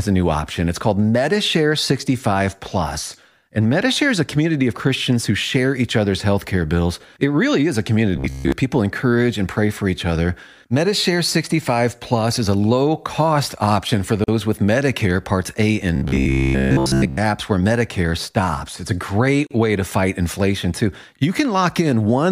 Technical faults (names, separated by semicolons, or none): robotic sound from repeated short buffers; gap at a join of encoded pieces